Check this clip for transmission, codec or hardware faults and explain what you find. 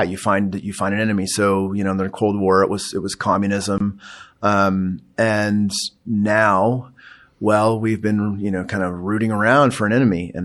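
Two faults are audible in the speech. Throughout, the sound is watery and swirly, with smeared attacks, plainly audible damage from likely MP3 compression, consistent with a bitrate around 64 kbps. From 3.78 to 3.80 s, a 24 ms silence breaks the continuous sound, which then resumes where it stopped. This is a gap at a join of encoded pieces, where encoder delay and end padding were left in.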